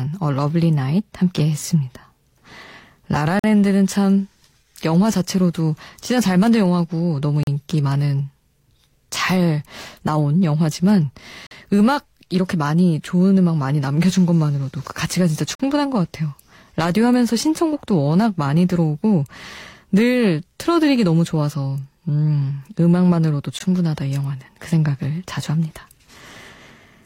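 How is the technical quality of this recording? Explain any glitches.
The speech is broken by five brief dropouts to silence. Gaps between stream segments at 3.39–3.44, 7.43–7.47, 11.47–11.51, 15.55–15.60 and 23.59 s (40–46 ms; last 17 ms), spaced at multiples of about 4 s, match segment boundaries whose timestamps leave holes filled with silence. Each sounds like a hard-edged cut and shows as a sharp blank vertical stripe on the spectrogram, with flat near-silent stretches in the waveform.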